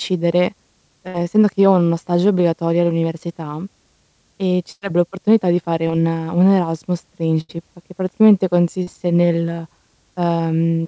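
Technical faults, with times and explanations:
Throughout: switching supply whistle. A steady high whistle sits around 8.4 to 9.0 kHz, roughly 10 dB below the speech, its pitch shifting within that band. A switching power supply running in an audible burst mode or beating with another one produces this tone.
1.08–1.16 s, 4.72–4.83 s, 7.41–7.51 s: burst of packet loss. The last sound is stretched into a held buzz or fading hiss, then the speech jumps ahead, at the first gap into "essendo che io ho" and at the last into "che praticamente". Consecutive packets arrived too late or never, removing about 60, 100 and 80 ms. The receiver extended and faded the preceding audio before resuming past the hole.
5.87–5.91 s, 8.83–8.89 s: short concealed packet loss. Brief smears or wobbles appear, the first right after "l'opportunità di fare". Roughly 20 and 40 ms of audio missed the decoder. The receiver bridged each hole by continuing the previous sound, then blended back into real audio.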